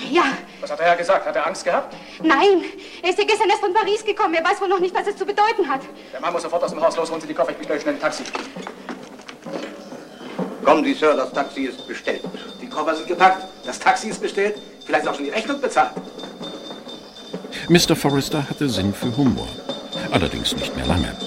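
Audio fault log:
Nothing stood out on listening.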